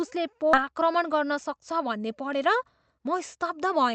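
Skip ahead at 0.53 to 0.55 s: a stretch of speech, roughly seven tenths of a second, never reaches playback, and nothing is inserted to cover it. The speech on either side is spliced almost directly, so the sound lurches forward mid-flow with no pause. This is what happens when a run of audio is lost in transit or discarded by the jitter buffer while newer audio is already queued behind it.

Jitter buffer speed-up from 0.63 to 2.56 s and again from 2.98 to 3.89 s: the receiver was holding more audio than its target, a backlog that fits late packets arriving together. To work that delay off, it repeatedly cut out pieces one or a few pitch periods long. The first stretch plays about 7 percent fast and sheds something like 150 ms. The second plays about 5 percent fast and drops around 50 ms. Pitch stays the same in both, but the speech sounds rushed.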